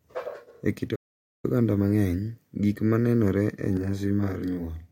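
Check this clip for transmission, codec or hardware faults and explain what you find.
Two faults are audible in this speech.

A playback stall cuts the speech off at 0.95 s, leaving nearly half a second of silence until 1.45 s, when it resumes. The likely cause is the player running short of data or having its output thread blocked, so nothing reached the output until it caught up.

A channel delay (doubling) begins at 3.77 s, just after "gik ma nenore e", and lasts to the end. The speech sounds doubled, with a second copy at equal level trailing 40 ms behind. One channel arrives 40 ms late, and summing both to mono layers the offset copies together.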